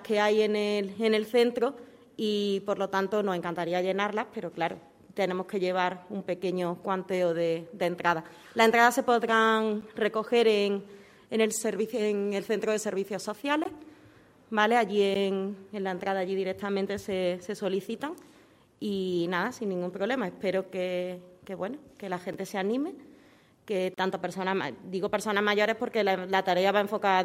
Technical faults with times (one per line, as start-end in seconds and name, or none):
9.81 block of digital silence
13.64 block of digital silence
15.14 block of digital silence
22.33 block of digital silence
23.94-23.98 block of digital silence